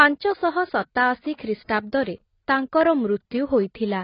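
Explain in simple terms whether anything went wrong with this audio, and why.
Heavy AAC compression is the likely cause of what you hear from start to finish. To shrink the file, the encoder threw away much of the detail in the speech, dropping all sound above about 5.4 kHz and keeping only a rough version of the rest. That is why the voice sounds dull and muffled, with the crispness gone, and why hissing sounds like s come out smeared, with a fizzy, warbling texture.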